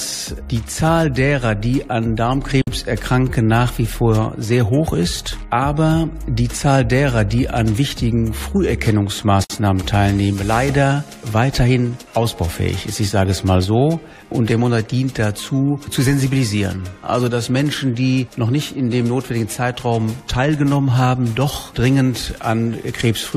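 The audio has two short dropouts to silence: one from 2.62 to 2.67 s, about 56 ms long, and another from 9.44 to 9.50 s, about 58 ms long. Each is a gap at a join of encoded pieces. The sound was encoded in separate sections and spliced back together untrimmed. Each encoder pass left its start-up delay and final-frame padding in place. So continuous sound breaks off, goes silent, then resumes where it stopped. The edges are smeared by the codec.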